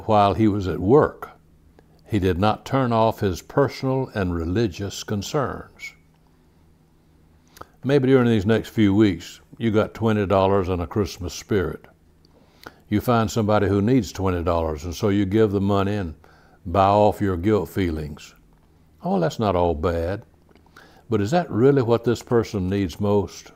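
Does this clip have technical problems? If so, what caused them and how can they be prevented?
Yes. From 22.07 to 22.79 s there is a galloping dit-dit-dit run of short buzzes pulsing at about 217 Hz, roughly 25 dB below the speech. These are GSM signalling bursts: a nearby 2G phone's radio pulses, rectified by the audio circuitry. Keeping phones away from the recording chain or in flight mode prevents this.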